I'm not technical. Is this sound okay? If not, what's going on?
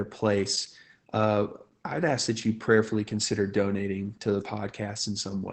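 No. Opus voice compression squeezed the whole clip into very little data, discarding everything above about 8.7 kHz, so the speech sounds muffled, hoarse and slightly robotic throughout.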